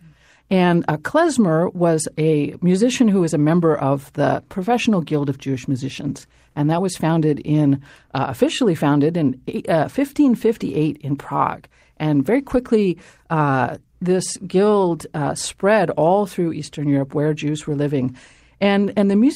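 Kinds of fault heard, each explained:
No faults can be heard.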